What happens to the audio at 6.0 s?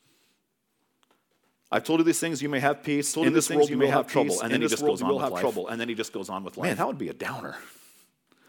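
At 6.0 s the speech carries a doubled audio track, spanning 3.13 to 6.83 s. A dry, full-band copy trails the original by roughly a second and a half, a few dB quieter, starting and stopping abruptly, likely from a second, slower capture path.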